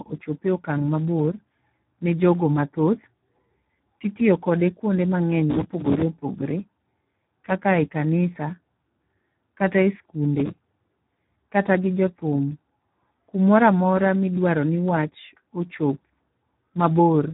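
Speex codec throughout: heavy low-rate CELP coding, consistent with about 8 kbps, leaves the speech hoarse and noisy, with nothing above 3.9 kHz.

Processor overload crackle at 5.50–6.02 s and 10.40–11.01 s: dozens of missed deadlines on what sound like roughly 5 ms buffers replay stale audio with hard edges, producing gritty tearing bursts.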